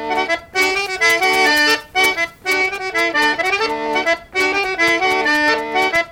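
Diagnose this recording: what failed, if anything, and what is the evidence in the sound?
Pre-emphasis left on, from 0.53 to 2.53 s. For those two seconds the top end jumps forward: the sound turns thin, bright and hissy-sibilant, with treble about 8 dB stronger at 10 kHz relative to 1 kHz. The tilt matches the CD 50/15 µs curve, so the high-frequency boost applied before storage was never undone by the matching de-emphasis at the playback or decoding stage. The balance returns to normal at 2.53 s.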